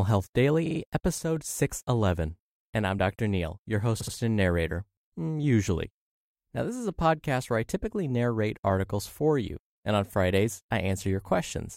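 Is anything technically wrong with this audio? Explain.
Yes, there are three faults. Repeated frames occur at 0.65 to 0.79 s and at 4.00 to 4.14 s, just before "and narrator mm usually". A run of compressed frames got duplicated, so the decoder replays the same snippet. The first time, a 46.4 ms block plays three extra times. The second time, a 69.7 ms block plays twice more. Each adds 139.3 ms of stutter.

From 1.18 to 1.36 s, the speech suddenly drops by about 6 dB and then returns. This is most likely one channel dropping out: with one stereo side gone, the mono sum loses half its shared content.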